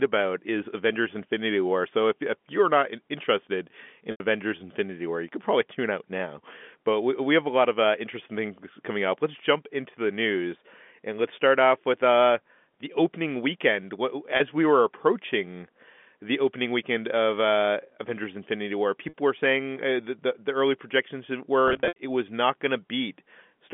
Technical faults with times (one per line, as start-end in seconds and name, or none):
4.11-4.20 packet loss with pitch repetition
14.37-14.40 packet loss with pitch repetition
19.09-19.14 packet loss with pitch repetition
21.68-21.98 packet loss with pitch repetition